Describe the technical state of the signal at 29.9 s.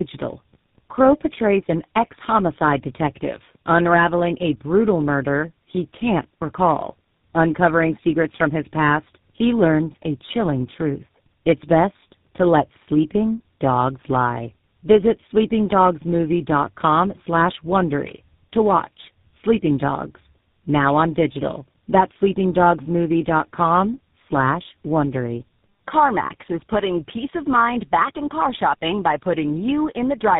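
At 29.9 s, as throughout, tandem speech coding is present: the speech sounds rough, muffled and warbly, with nothing above 3.7 kHz. This points to three speech codecs in a row, each re-encoding the previous one's degraded output.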